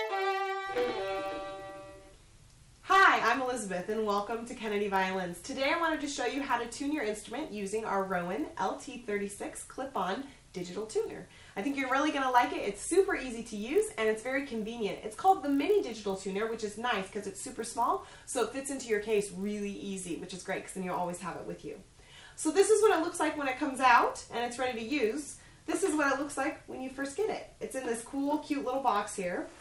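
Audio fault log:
throughout, resampler restarted on every block: a steady 50 Hz buzz rides under the sound, made of tiny ticks spaced 20 ms apart. Each block was converted in isolation, which fits a 24 kHz to 48 kHz upsampling, so the filter lacked real neighbouring samples at every block edge and left a small error there. Unlike mains hum, the buzz vanishes in silent passages and rises and falls with the signal. Unlike dropout clicks, its spacing is strictly regular.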